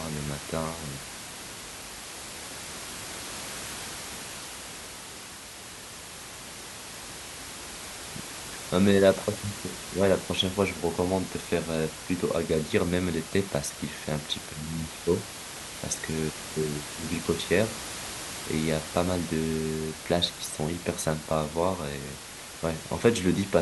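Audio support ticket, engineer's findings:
Nothing to flag on the system side; the only thing in the background is ordinary room noise sitting about 11 dB under the speech, which comes from the recording space itself.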